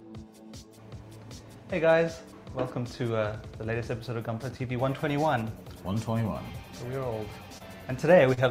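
At 6.52 to 6.56 s and again at 7.58 to 7.62 s there is short concealed packet loss. Each time, about 20 ms of audio never arrived, and the receiver covered the gap by extending the preceding sound, for about 15 ms and 21 ms respectively, before blending back into the real signal. Each is a brief smear or wobble, and the material in that window is missing rather than late.

At 8.34 to 8.39 s a short stall from a late packet behaves differently. Nothing is lost. The jitter buffer ran dry while a packet was delayed, so the last sound is held for about 31 ms and then resumes exactly where it stopped. It comes across as a slightly prolonged, faintly buzzy moment rather than a smear. What sets it apart from the earlier two events is that everything after it lands about 31 ms later, with no content skipped.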